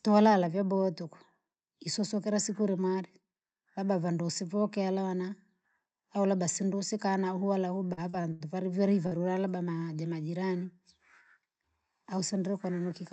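From 7.87 s to 8.46 s the speech breaks up with repeated packet loss, giving a robotic sound. Five separate holes open in quick succession, the longest about 81 ms. Each is patched by extending the preceding sound, so roughly a third of that stretch is synthetic continuation rather than received audio. Because the patches follow each other so closely, the result is a choppy texture with fragments of the speech missing.

At 9.07 s to 9.14 s there is a single short concealed packet loss. About 40 ms of audio failed to arrive in time, and the receiver filled the gap by carrying the last sound forward before blending back into the real signal. It is heard as a brief smear or wobble, and a short sound falling in that window can drop out.

Between 11.39 s and 11.62 s a jitter buffer speed-up plays the audio at about 115% of normal rate. The buffer had accumulated more audio than its target, so the receiver trimmed small pitch-period slices, around 50 ms in total, to bring the delay down. 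Pitch stays the same, but the speech sounds hurried through that stretch. Throughout the clip, the call codec limits the audio to about 8 kHz.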